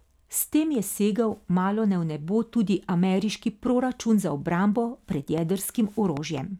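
Something in the chain, likely interference from nearby equipment or a faulty connection or power supply, injects a train of clicks into the speech from 5.38 to 6.39 s, just after "za obrambo pred". Around three near-identical pulses arrive at an uneven pace, averaging about two per second, each peaking roughly 10 dB above the surrounding signal. They are heard as sharp pops that sit on top of the sound rather than blending with it.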